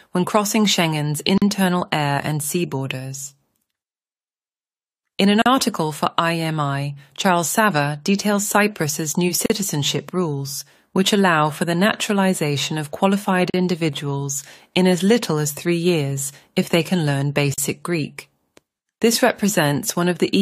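Gaps at joins of encoded pieces fall at 1.38, 5.42, 9.46, 13.50 and 17.54 s, every 4 s, each about 40 ms long. Each separately encoded piece kept its padding silence, so the speech drops out, then carries on where it stopped.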